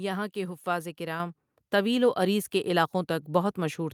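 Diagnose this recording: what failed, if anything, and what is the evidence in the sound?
The failure is in call processing: a microphone volume step-up at 1.2 s. The speech and the background noise both jump by about 6 dB at once, which points to the software raising the device's input gain in a single step rather than a change at the source.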